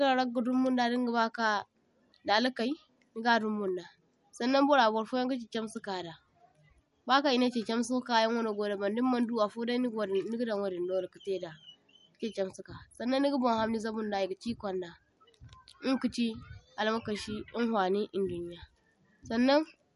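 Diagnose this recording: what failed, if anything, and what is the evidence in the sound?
The codec stage is where this went wrong, and it's audible all the way through. The speech has no content above 11.2 kHz, a hard treble cut-off, and the damage is plain: a watery, swirly texture with chirpy, metallic s sounds and softened attacks. That's likely MP3 compression run short of bits, which points to a low bitrate of about 49 kbps. Starved of bits, the encoder dropped the top band and let weak frequency lines flicker on and off from frame to frame.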